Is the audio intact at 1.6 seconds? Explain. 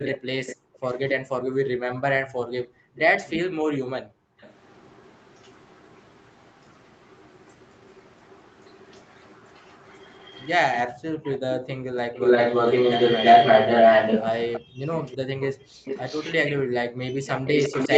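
No. A speech-suppressed-in-double-talk fault runs from 0.09 to 2.32 s. The echo canceller, likely confused by both sides talking, pulls the speech down by as much as about 40 dB in pieces, for roughly a second and a half in total. The waveform shows collapsed gaps. An echo leak is also present from 0.05 s onward: a copy delayed by 329 ms, about as loud as the speech, likely leaking from a loudspeaker. The spectrogram shows the same pattern repeated a third of a second later.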